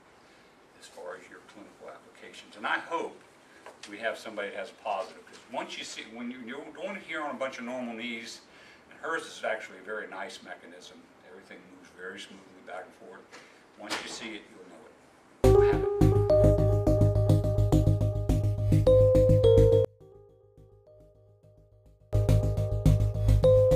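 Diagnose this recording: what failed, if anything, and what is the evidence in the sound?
From 19.85 to 22.13 s the sound collapses by about 34 dB into a faint residue, with the centre almost gone. The likely cause is one channel inverted, a polarity reversal in the analogue wiring, so the shared content cancels when summed to mono.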